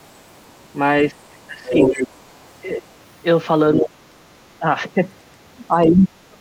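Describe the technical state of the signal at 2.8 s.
At 2.8 s, the other side's voice leaks through from 2.73 to 2.82 s as a faint second voice roughly 15 dB under the main speech, likely uncancelled loudspeaker echo. On a spectrogram it shows as a weak, overlapping harmonic trace.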